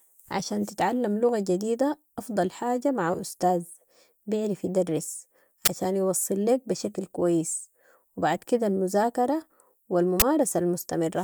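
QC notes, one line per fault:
5.65–5.68 s and 10.20–10.22 s, uninitialised buffer: two brief, loud bursts of digital noise break into the speech, each lasting about 21 ms. In each case the playback path sent out a block of memory before any audio had been written to it, so whatever stale values were sitting there came out as samples. These values bear no relation to the speech, so each burst sounds harsh and abrupt. The equal lengths fit a 1024-sample block.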